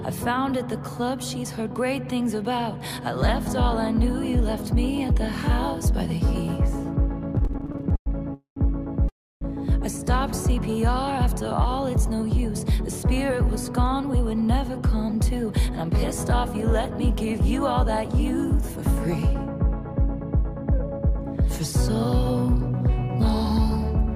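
From 7.35 to 8.08 s the sound stutters repeatedly: packets arrived late, the jitter buffer kept running dry, and 15 short gaps, the longest 105 ms, were filled by continuing the previous sound. A spectrogram shows smeared, repeated slices, and the waveform shows uneven, stretched fragments.

Two call audio freezes follow, at 8.34 to 8.58 s and 9.08 to 9.43 s. The sound holds as a brief buzz or hiss that fades into silence, about 120 ms and 300 ms respectively, before resuming where it stopped, likely after packets were delayed in transit. The waveform shows flat stretches and the spectrogram blank columns.

Jitter buffer speed-up runs from 12.11 to 18.77 s at 103% and from 19.86 to 23.45 s at 104%, as the receiver trimmed pitch-period pieces to shed excess buffered delay. Pitch holds but the sound runs slightly faster. Harmonics stay level while onsets arrive slightly early.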